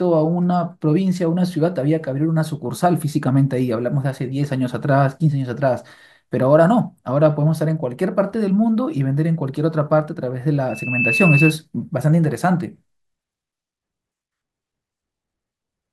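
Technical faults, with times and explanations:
10.69–11.53 s, loudspeaker feedback squeal: a single piercing tone near 2.6 kHz rises out of the speech, swelling over roughly a third of a second until it sits about 5 dB above the talker, then stops. A microphone is picking up the loudspeaker it feeds, and at that one frequency the round trip through the loop gains more than it loses, so the tone keeps reinforcing itself until the amplifier limits it or the loop is broken.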